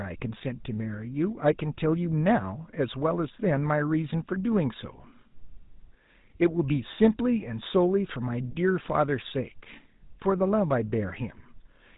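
Speech carrying GSM full-rate codec damage throughout: nothing above 4 kHz and a gravelly buzz from coarse pulse excitation, which fits a 13 kbit/s phone link rather than simple band-limiting.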